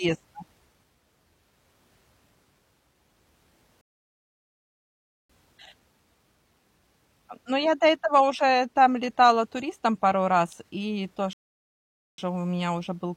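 Playback ran dry twice in this speech: the player used up its downloaded audio and halted until more data arrived, a rebuffering stall. The first runs from 3.81 to 5.30 s, adding about 1.48 s of silence; the second, from 11.33 to 12.18 s, adds 0.85 s. Each time the speech cuts abruptly to dead silence and then picks up exactly where it stopped, with nothing skipped, just a gap stretching the timeline.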